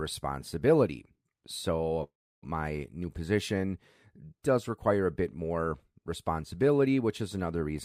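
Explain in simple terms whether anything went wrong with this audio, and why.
From 2.03 to 2.44 s the speech stalls: the last sound hangs on as a short fading buzz, then goes quiet for about a third of a second before resuming exactly where it stopped. This call audio freeze was likely caused by delayed network packets.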